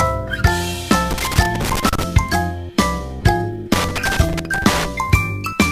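Right from the start there's sample clock jitter, a few microseconds of timing wobble, leaving a rough hiss roughly 25 dB down that swells on loud, bright passages. Then loose connector crackle hits twice, 1.11 to 2.03 s and 3.73 to 4.85 s, a flaky contact chopping the line into scratchy bursts.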